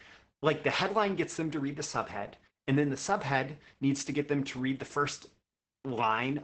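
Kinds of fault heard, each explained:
Opus voice compression: muffled, hoarse and slightly robotic speech with nothing above about 8.6 kHz, as heavy low-bitrate SILK coding near 10 kbps narrows and coarsens it.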